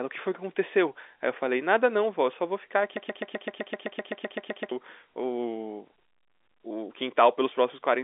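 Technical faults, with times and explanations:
2.97 to 4.72 s, broken-record loop: a 128 ms slice of the speech repeats exactly, 14 times back to back, and whatever should have played in that stretch is gone. Likely the player or stream stalled and kept resending the last fragment it held.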